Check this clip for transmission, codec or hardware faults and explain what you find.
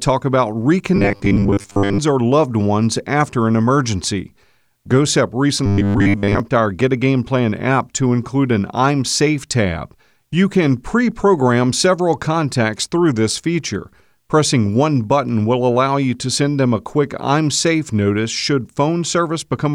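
There's one fault here, robotic sound from repeated short buffers, and it shows up twice: from 0.96 to 2.00 s and again from 5.66 to 6.40 s. The speech turns into a stiff, metallic buzz locked at 100 Hz while still roughly tracking the syllables. That's likely audio arriving too slowly, so a 10 ms chunk gets looped to fill the gaps, covering most of each stretch while the real signal is dropped.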